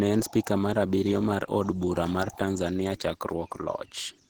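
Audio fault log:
throughout Opus compression, likely running in hybrid mode at a rate that fits about 16 kbps, leaves the speech plainly hoarse and grainy, though the bandwidth still reaches about 20.3 kHz.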